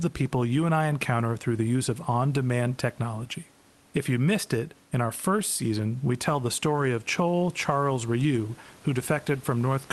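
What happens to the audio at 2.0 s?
Nothing goes wrong at 2.0 s: the speech passes through intact there, with only the faint room noise sitting well beneath it.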